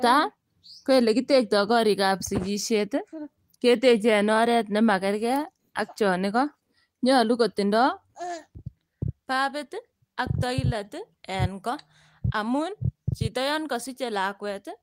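Slight hiccups and an unsteady pace run through the speech, because of clock drift between sender and receiver: the sender's clock runs roughly 5 percent fast, so the receiving buffer keeps overfilling. From 0.05 s to the end, small skips recur at uneven intervals. These are repeated timing corrections, where the receiver trims short pieces to keep up with audio arriving at 105 percent speed.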